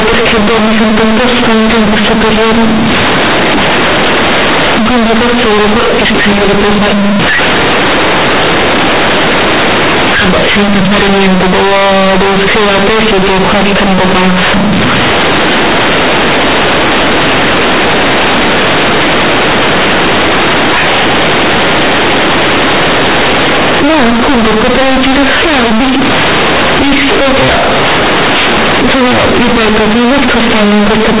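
From start to finish, the A-law bytes of a G.711 stream are being read as linear 8-bit samples. The companded audio read as linear is never expanded. Every sign change throws the output across roughly half its range, so soft passages come out as large as loud ones and the waveform is badly bent. The speech sounds very loud and harshly buzzy, with heavy noise filling the pauses, all within the 4 kHz telephone band.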